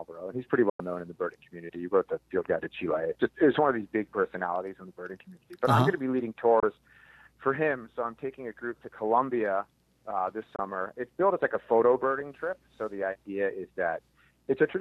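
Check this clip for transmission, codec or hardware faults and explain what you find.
There are three short digital broadcast dropouts. The first runs from 0.70 to 0.80 s, a hole of about 96 ms, which fits four lost frames of 24 ms each. Two single-frame gaps of 24 ms follow at 6.60 and 10.56 s. Each time, the receiver stopped getting frames it could decode, so it muted with a very quick 3 ms fade and came back once clean frames arrived. The sound from those moments is simply gone.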